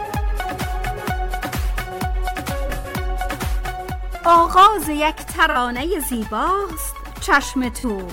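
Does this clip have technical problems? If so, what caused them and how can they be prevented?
Yes: AAC frame loss with concealment at 2.65–2.91 s, 5.51–5.56 s and 7.79–7.84 s, smeared, noisy patches where the decoder repeated the last spectrum, seen as blurred spectrogram columns. Prevent with error-protected, retransmitting delivery.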